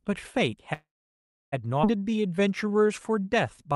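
From 0.73 to 1.54 s there is a call audio freeze: the sound hangs, decays into about 0.66 s of silence, then resumes where it stopped. This is likely a jitter buffer running dry while packets were delayed, inserting roughly 0.79 s of gap without losing audio.

At 1.82 to 1.85 s a skip ahead occurs. Playback jumps forward with almost no gap, and about half a second of speech is gone. The two sides are spliced nearly directly, as when queued audio is discarded to catch up.

From 2.04 to 3.73 s a jitter buffer slow-down stretches the speech to 89% speed at unchanged pitch, adding about 0.2 s through repeated pitch periods and pause fragments. Sounds are drawn out, over the Opus call path's top end near 12 kHz.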